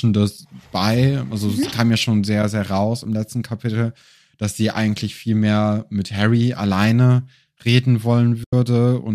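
At 8.44 s, just after "alleine reden", the speech falls into a soft-edged hole lasting about 90 ms, to 8.53 s. This is AAC frame loss with muting: the decoder replaced the missing frames with silence, and the overlapping windows fade the sound out and back in. The 90 ms gap fits a run of roughly nine 10 ms frames, consistent with low-delay AAC framing; the speech also carries light coding damage, which is likely from low-delay AAC compression.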